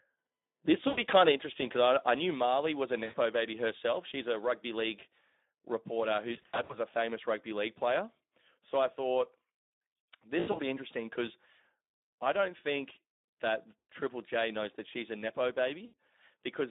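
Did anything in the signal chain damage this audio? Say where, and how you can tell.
Yes. Throughout, the speech sounds hoarse and grainy, confined to a narrow band of roughly 200 Hz to 3.7 kHz. That is the Speex codec, at what fits a bitrate around 11 kbps. This CELP coder has too few bits for its excitation, leaving noise riding on the voice.

At 0.87–1.04, 3.03–3.16, 6.33–6.80, 10.39–10.69, 13.83–13.90 and 15.85–15.94 s the speech smears out and fades. That is VoIP packet loss concealed by the speech codec. Packets were lost on the network, and the decoder extrapolated its last pitch and filter with shrinking gain.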